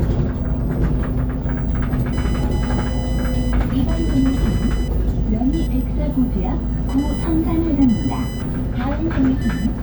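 From 2.13 s to the end, computer activity noise: computer load changes disturb the shared ground, adding a chirping buzz near 1 kHz, roughly 25 dB below the sound.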